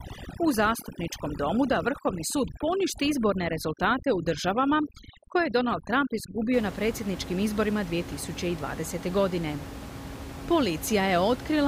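From the start of the clip to about 6.54 s, overdone noise removal is at work: a noise reducer set far too aggressively pulls individual frequency bands down or shuts them off whenever they sit close to its noise estimate, and the softer parts of the speech fall below that threshold too. The background drops and breaks up into twinkling specks. After that point, the room noise, about 12 dB below the speech, comes back into view.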